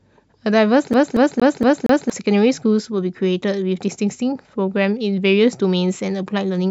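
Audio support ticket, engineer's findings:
CD stuck on one turn, 0.93 to 2.10 s. Same 0.23 s slice of speech loops five times, tiny mute at each jump, fast even stutter. Probable component: disc/transport. Scratch kicking the laser back a track every revolution. Check the source disc.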